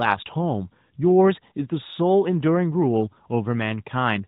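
No technical faults are audible.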